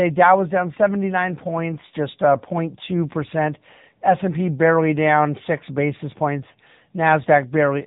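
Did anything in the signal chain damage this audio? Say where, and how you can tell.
Yes, the codec stage: AMR narrowband mobile codec throughout. Nothing passes above 3.8 kHz, and the speech sounds buzzy and synthetic, which fits a bitrate of about 8 kbps.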